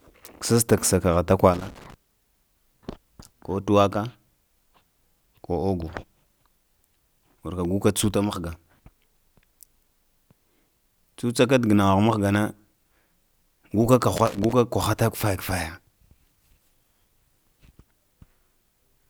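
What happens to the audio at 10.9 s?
Nothing goes wrong at 10.9 s: the audio there is intact, with no dropout, click, distortion or other fault.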